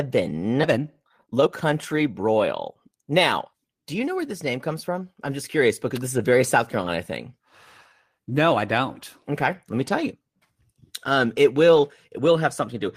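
At 0.63 to 0.65 s the speech has a skip ahead: roughly a second of audio was discarded, either lost in transit or flushed by an overflowing jitter buffer, and playback jumps straight to later material with no gap or fill, splicing the two sides together almost directly.

From 0.67 to 3.13 s a jitter buffer speed-up follows. Having held more audio than its target, the receiver removes short pitch-period segments repeatedly, trimming around half a second. Speech runs at 118% speed without a pitch change, sounding noticeably hurried.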